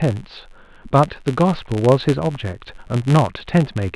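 Throughout the speech a buzz at about 93.8 Hz rides on the signal: the filter is restarted on every block, fitting a 256-sample block, so each block opens with a small transient. Unlike mains hum, it rises and falls with the speech level and drops away in pauses.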